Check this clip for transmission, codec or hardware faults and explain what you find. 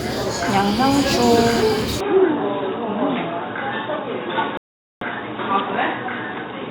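Two faults are present. From 2.00 s to the end, the sound narrows sharply, and the likely cause is an input switched to a poorer device. The change is instant, with no gap at the switch. After it, nothing reaches above 3.8 kHz. The top end is gone, so the sound turns dull and boxy. The level stays about the same. A new background noise sits roughly 40 dB below the signal. It belongs to the second device's own noise floor.

At 4.57 s there is a rebuffering stall. The player ran out of downloaded audio and had to wait for more. The sound drops to silence until 5.01 s. It then resumes exactly where it stopped. No material is lost. The pause adds 0.44 s to the running time. The break sounds like a clean hole, not a jump or a skip.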